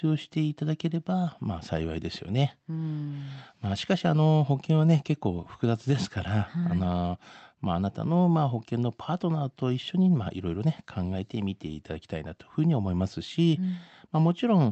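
No technical faults are heard anywhere in this speech clip.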